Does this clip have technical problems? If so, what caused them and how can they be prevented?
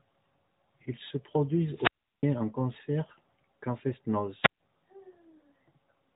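Yes. Two wireless microphone squelch dropouts occur at 1.69 to 2.35 s, with a 0.36 s mute before "en concert qu'en", and at 4.41 to 4.60 s, with a 0.14 s mute. Each time the analogue FM radio link faded, the receiver's squelch briefly cut the output. A waveform shows a flat gap, and a spectrogram shows a smear of broadband hiss up to the 3.8 kHz ceiling of the narrowband mobile path before a blank band. Placing the receiver antennas closer, with clear line of sight, or using a diversity receiver would prevent it.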